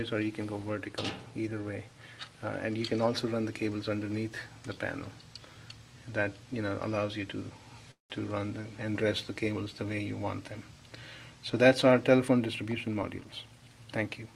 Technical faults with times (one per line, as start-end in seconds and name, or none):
7.91-8.12 call audio freeze
12.26-13.53 jitter buffer speed-up